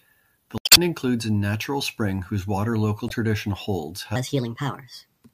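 At 0.56 s there's a short glitch that runs to about 0.78 s, just before "includes a natural spring", and a second, briefer blip from 3.06 to 3.12 s, between "natural spring whose water" and "tradition holds". Both are damaged data in the compressed stream: some bytes in those frames were wrong, so the decoder choked on them, lost its place and had to hunt for the next good frame header. That's where the glitch comes from.

Then, from 4.16 s, right after "tradition holds", through to the end, the speech suddenly turns quicker and higher. That last stretch is a section at the wrong speed, running at 1.27 times normal, which lifts the pitch by roughly four semitones because speed and pitch move together. The likely cause is that part being played or resampled against the wrong clock.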